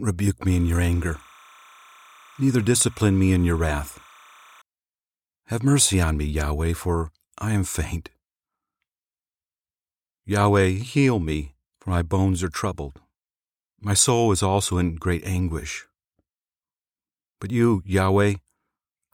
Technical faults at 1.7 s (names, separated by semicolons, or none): timecode bleed